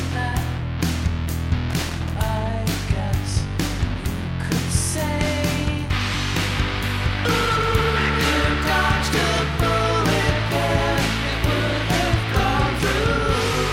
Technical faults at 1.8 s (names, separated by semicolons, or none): loose connector crackle